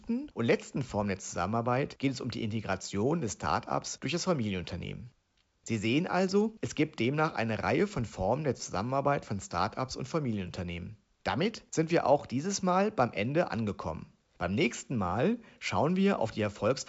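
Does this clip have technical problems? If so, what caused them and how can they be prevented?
No, there are no technical faults to point to in this clip. The speech comes through G.722 wideband telephone coding at 64 kbit/s, with nothing above about 7.7 kHz and any coding damage faint at most.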